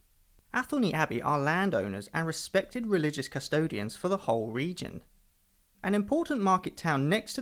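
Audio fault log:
Nothing stood out on listening to this speech clip.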